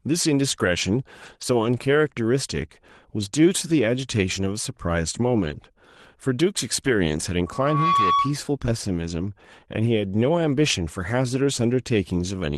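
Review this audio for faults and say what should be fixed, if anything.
Lost packets rebuilt from error correction at 1.25–1.35 s, 1.41–1.43 s, 3.51–3.53 s and 5.43–5.57 s sound rougher and noisier, because the decoder played low-bitrate copies carried in the following packets.

Short concealed packet loss at 1.37–1.41 s leaves a brief smear where the receiver extrapolated 20 ms of missing speech from the preceding sound.

A loudspeaker feedback squeal from 7.46 to 8.38 s is a 1.1 kHz tone that swells over roughly 0.4 s to about 5 dB above the speech, because the microphone's pickup of its own loudspeaker exceeded unity loop gain at that frequency.

To prevent these, stabilise the network path to cut packet loss, and reduce speaker-to-microphone coupling with headphones, lower playback gain or acoustic echo cancellation.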